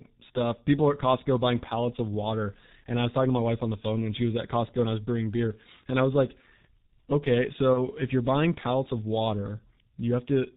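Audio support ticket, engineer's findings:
G.723.1 codec, whole clip: speech coded at low rate, consistent with about 6.3 kbit/s G.723.1. Band cut at 4 kHz, slow 30 ms model updates. Heavy damage: muffled, hoarse speech, smeared consonants throughout.

VoIP packet loss concealed by the speech codec, 7.73–7.79 s, just before "if you're buying pallets": about 30 ms missing, which fits one lost frame. Decoder extrapolated the last pitch and filter with falling gain, giving a brief fading smear and weak or distorted onset after.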